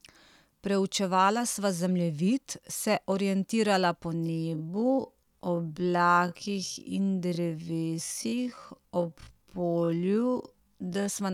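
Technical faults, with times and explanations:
4.14 to 11.10 s, time-stretched section: after "zemljevid se orientirala po" the speech abruptly drops to half its pace while the pitch stays the same, dragging until "sva na koncu". This is likely software lengthening the audio by repeating short segments to hold the pitch.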